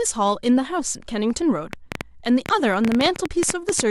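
From 1.73 s to 3.81 s a train of clicks ticks over the speech. About twenty similar pulses arrive at an uneven 8.2 per second, peaking well above the speech, likely from interference or a faulty connection. The waveform shows narrow spikes, and the spectrogram shows thin, full-height vertical lines.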